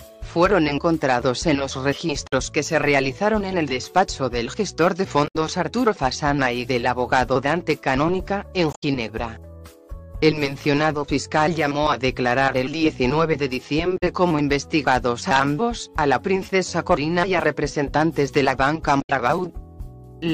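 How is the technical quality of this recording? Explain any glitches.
The recording has five short glitches from damaged data in a compressed stream, at 2.26–2.33 s, 5.27–5.36 s, 8.73–8.84 s, 13.96–14.03 s and 19.01–19.10 s. Corrupted bytes make the decoder misread frames and resynchronise, producing brief chirps or squawks lasting 66 to 110 ms.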